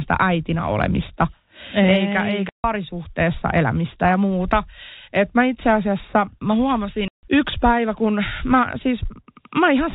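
At 2.49 to 2.64 s and again at 7.08 to 7.23 s, between "mä itse asiassa mä" and "yksi päivä kun mä", there's packet loss filled with silence. Each 150 ms hole has hard edges, which fits a short run of lost packets replaced by dead air, all over telephone-band G.711 audio.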